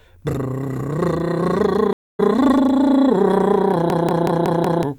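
A stream reconnect breaks the music at 1.93 s. The connection dropped, the player fell silent for about 260 ms, then reconnected and started a fresh decoder partway into the stream. When sound returns at 2.21 s the music has moved on by roughly a fifth of a second, so a short stretch is simply missing rather than paused. The restart comes in softly, with the first moment muted or faded in as the new decoder settles.

A system hang loop runs from 3.90 s to 4.83 s. The computer or its audio driver froze while the sound hardware kept cycling through the same ring buffer, replaying one fixed slice of music over and over. Each slice lasts about 186 ms, which fits an 8192-sample buffer, and it repeats five times at 5.38 Hz, giving a juddering machine-gun stutter. Roughly a second of the music is lost behind it.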